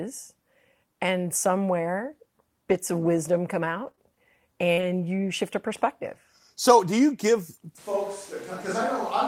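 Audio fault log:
2.69–2.75 s, lost packet rebuilt from error correction: between "and somewhere" and "of wisdom come" two lost packets were replaced by the low-bitrate redundant copies carried in the following packets. There is no gap, but about 40 ms sounds rougher and noisier.
3.83–4.83 s, repeated packet loss (robotic sound): after "of wisdom come" and before "you shift a perspective", three separate losses were concealed by extending the preceding audio. That covers about 8% of the span, and the longest hole is 42 ms. The result is a choppy texture with short pieces missing.
7.79 s to end, switch to a distant microphone: following "so do you give", the sound abruptly turns roomy and hollow, drops about 5 dB in level, and picks up room noise roughly 20 dB below the speech. This likely comes from losing the close microphone and falling back to a farther one.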